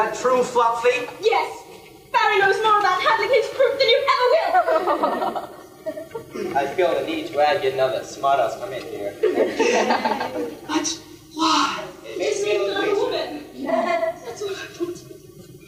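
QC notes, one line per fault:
11.66 to 14.25 s, channel delay (doubling): the sound thickens into a doubled image, with a second copy trailing the first at equal level like a tight slap. One channel is running about 40 ms behind the other, which fits a late buffer on that side, and when the two are summed to mono the late copy doesn't fuse with the original but lands as a distinct repeat.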